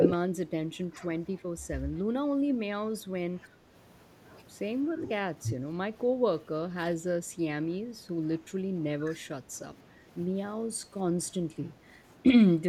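The speech in this clip dips in level in short bursts at 0.0–1.31 s, 2.47–3.48 s, 4.92–5.56 s, 6.16–6.24 s, 6.9–6.99 s and 9.06–9.27 s, sinking by up to around 10 dB, with the milder dips nearer 5 dB. The pattern fits speech suppressed in double talk, likely from an echo canceller that, with both ends speaking at once, mistook this talker for loudspeaker echo and pulled the level down.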